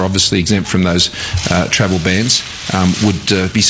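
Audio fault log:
No faults are heard in this audio. It has passed through a WebRTC call path with the G.722 codec at 64 kbps, which leaves nothing above 8 kHz.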